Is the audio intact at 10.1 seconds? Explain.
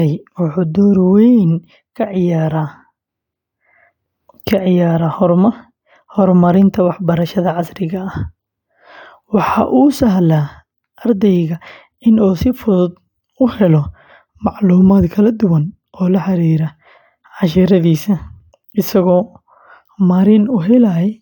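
Yes, at 10.1 seconds the audio is intact, with no fault heard at that moment.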